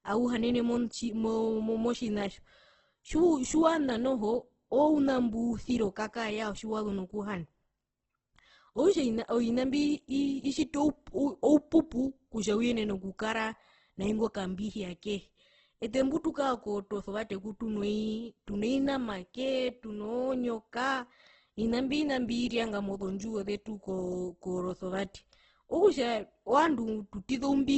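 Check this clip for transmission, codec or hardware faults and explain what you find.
Heavy Opus compression runs through the whole speech clip, likely from a very low bitrate around 12 kbps. Nothing survives above 8.2 kHz, and starved bands are refilled with folded or noise-like content, so everything sounds grainy, rough and hissy rather than swirly.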